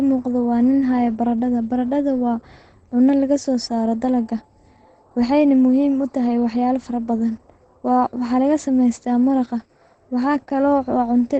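From start to finish the speech sounds muffled and hoarse, with no air or sibilant sparkle. The likely cause is heavy Opus compression in its speech-oriented SILK mode at wideband, which fits a very low bitrate near 12 kbps. On a spectrogram, energy stops abruptly at about 8.9 kHz, leaving a flat empty band above. The waveform looks intact, so the damage lies in lost spectral detail.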